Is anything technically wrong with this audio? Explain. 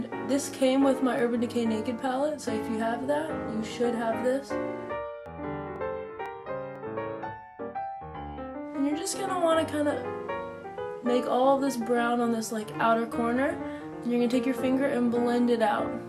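Yes, there are periodic USB or driver dropouts. From 5.26 to 6.76 s, about four tiny skips, each roughly half a millisecond, recur every 0.5 s as the stalled driver drops samples. They sound like regular ticks and show as thin vertical broadband lines and waveform discontinuities.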